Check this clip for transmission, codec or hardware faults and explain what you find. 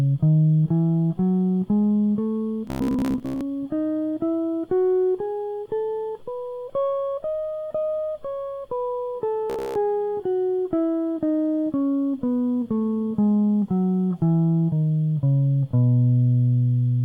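Two faults, both robotic sound from repeated short buffers. From 2.67 to 3.41 s and from 9.50 to 9.83 s, the music collapses into a rigid, metallic buzz near 66.8 Hz. The likely cause is starved playback looping a roughly 15 ms slice, skipping most of the real audio in the first span and about half in the second.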